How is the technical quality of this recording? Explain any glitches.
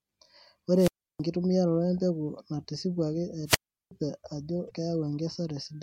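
The recording has three glitches: two wireless microphone squelch dropouts and one burst of damaged data in the compressed stream.

From 0.75 to 1.20 s, and again from 3.46 to 3.91 s just after "empeku natisipwaki", the radio link from the microphone weakens until the receiver's squelch gate shuts the output. Each time you hear hiss swell, then near silence for about 0.32 s and 0.37 s respectively, before the speech returns.

From 4.67 to 4.71 s, corrupted bytes in the compressed stream cause the decoder to misread the affected frames and lose its place while it hunts for the next valid frame header. The result is a brief glitch.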